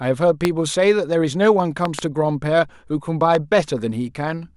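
Loud pops land at 0.45 to 0.47 s, at 1.85 to 2.01 s as a double pop, and at 3.35 to 3.37 s, each peaking about 15 dB above the speech. A sudden voltage step or pulse, likely from a plug, switch, static discharge or driver glitch, was added to the signal and shaped by the following circuitry into a sharp thump. The speech continues beneath each pop.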